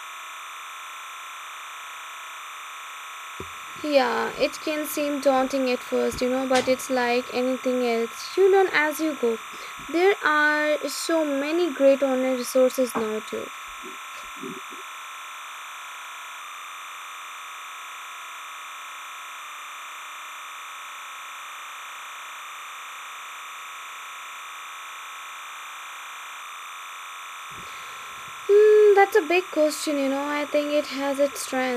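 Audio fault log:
Throughout, timecode bleed: a steady chirping warble sits behind the speech for the whole clip. Its level is roughly 15 dB below the speech. Linear timecode from a nearby track or cable has leaked into the audio path. That code is a square wave flipping between two pitches, around 1 and 2 kHz. Its 29.97-frames-per-second rhythm gives the chatter its even, mechanical pulse.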